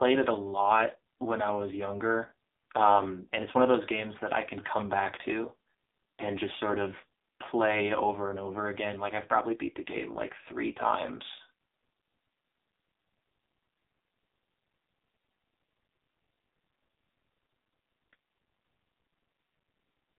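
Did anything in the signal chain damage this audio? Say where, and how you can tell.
Yes: at the codec stage, the AMR narrowband mobile codec damages the speech throughout. The 200 Hz to 3.7 kHz band and the heavy buzzy, synthetic texture fit a low 5.9 kbps mode.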